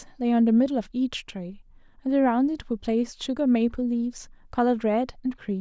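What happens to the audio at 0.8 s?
Nothing goes wrong at 0.8 s; the speech runs through that moment intact, with no dropout, click or distortion.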